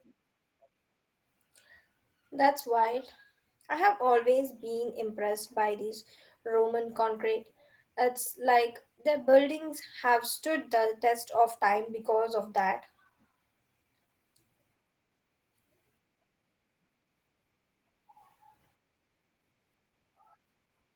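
Throughout, the speech sounds hoarse, grainy and slightly robotic. This is Opus voice compression at a rate consistent with about 16 kbps, coarsely coding the excitation in hybrid mode.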